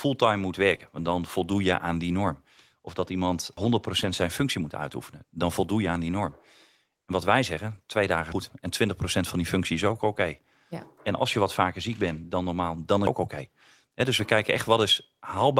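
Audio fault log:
0.75–0.81 s: short concealed packet loss. About 40 ms never arrived in time, so the decoder carried the previous sound forward across the hole and blended back in. You hear a quick smear or wobble rather than a clean gap.
3.57 s, 8.32 s, 13.07 s: audio missing between chunks. At each point about a third of a second just drops out, with the two sides butted together and no silence. The spacing of nearly 5 s likely means the audio was handled in 5-second chunks, losing a bit at each handover.
4.01–4.11 s and 14.53 s: lost packet rebuilt from error correction. No gap here. The decoder played low-bitrate backup copies carried in the following packets, so those stretches come out rougher and noisier. The first one is about 60 ms, which fits three 20 ms packets. The second is about 20 ms, which points to a single packet.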